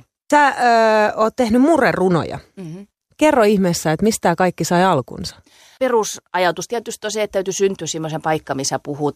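Nothing technical goes wrong anywhere in this speech recording, so there's no fault to describe at any point along the way.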